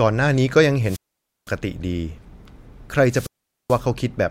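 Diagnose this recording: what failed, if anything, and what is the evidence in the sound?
Wireless microphone squelch dropout, twice, at 0.82–1.55 s and 3.07–3.83 s. Hiss rises as the RF link fades, then the receiver's squelch mutes for about 0.51 s and 0.43 s.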